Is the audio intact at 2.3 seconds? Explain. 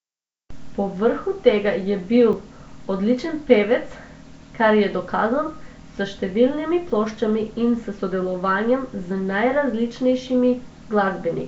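No. At 2.33 s, just after "tega je bil", there is a dropped buffer (overrun). The audio skips forward with no gap, losing about 15 ms, which is likely because the program failed to collect its samples before the hardware overwrote them. The two sides are spliced directly together, so you hear a jump in the sound. On a waveform this shows as an abrupt step where the trace breaks its curve, and on a spectrogram as a thin vertical broadband line.

That moment also carries the rough, hissy halo and smeared, underwater quality of Nellymoser compression, which is plainly audible across the whole clip. The damage is likely from the Flash-era Nellymoser Asao codec. It codes short blocks with very few bits, leaves weak bands empty and fills them with noise. On a spectrogram there is patchy, blocky noise filling the gaps between formants.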